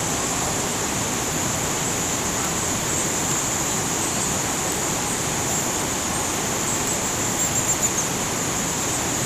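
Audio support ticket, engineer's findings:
Bit error spikes at 2.45, 3.31, 4.72 and 6.87 s. Isolated sharp ticks, broadband, unrelated to the sound underneath. Probable component: memory or digital link, one flipped bit per event. Sample value jumps by a power of two, then returns. Each is a single-sample glitch except 3.31 s, which fits two adjacent samples and sits about 6 dB below the other three. Check interface integrity and buffer memory.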